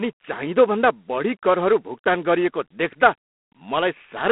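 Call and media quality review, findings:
G.726 ADPCM throughout, sound fitting about 24 kbit/s: too few bits for difference coding, giving harsh rasping hiss tracking speech level; band roughly 200 Hz to 3.5 kHz, nothing above 3.9 kHz.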